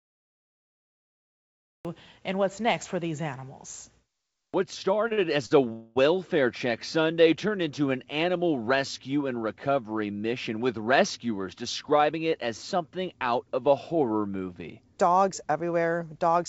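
The audio opens with a cut-off start: from 0 to 1.85 s there is digital silence, and the sound begins abruptly mid-syllable just before "and what's next for". The capture began late, so there is no attack or fade-in. The waveform is a flat line that jumps straight into the signal at 1.85 s, and the spectrogram shows a hard vertical edge with possibly a thin broadband click where the signal starts.

Three short stalls from a late packet follow. At 5.08 s a sound is held about 26 ms too long, immediately followed at 5.13 s by a 51 ms hold, and at 5.46 s by another 49 ms hold. Each time a packet missed its slot, the jitter buffer emptied, and the receiver stretched the last sound until the packet arrived, then carried on with nothing lost. On the spectrogram the harmonics run as flat, frozen bands for those few tens of milliseconds, sometimes with a faint buzz or a small dip in level.

At 5.73 to 5.98 s comes a call audio freeze. 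About 230 ms of gap is inserted as the last sound is continued as a fading buzz-like tone, never reaching full silence, before the audio resumes where it stopped. The likely cause is held-up packets draining the jitter buffer. The waveform shows a repeating, decaying pattern, and the spectrogram a smeared, static harmonic band that fades out.

From 11.39 to 12.46 s, ending just before "something out of a", a jitter buffer speed-up makes the sound run about 6% faster at the same pitch, so it comes across as slightly hurried. Having built up excess delay, the buffer cut around 70 ms in total as many tiny pitch-period-sized pieces. The spectrogram shows syllables compressed in time with unchanged harmonic spacing, and the waveform has subtle splice points where cycles were dropped.

Throughout, the call path limits the band to nothing above 8 kHz, which fits a G.722 codec at 64 kbps.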